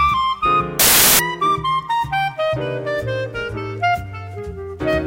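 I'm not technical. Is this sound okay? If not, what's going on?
No, not entirely. From 0.79 to 1.19 seconds the sound is replaced by a burst of loud hiss, a fault known as samples built from the wrong bytes. Digital audio stores each moment as a number split across a couple of bytes, and here the player assembled those bytes in the wrong order or position. The small, rapidly changing part of each number ended up treated as the big part, so the result is harsh noise instead of the real sound, lasting about 0.4 seconds.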